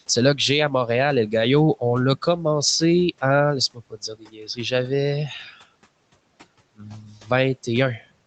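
Speech cut by the noise suppressor shows up at 3.74–3.98 s, 4.14–4.59 s and 6.79–7.3 s. It mistook bits of speech for noise, pulling them down by up to about 17 dB, so they sound swallowed.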